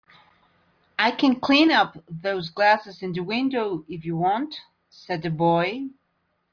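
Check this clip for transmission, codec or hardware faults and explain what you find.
No faults detected in this clip.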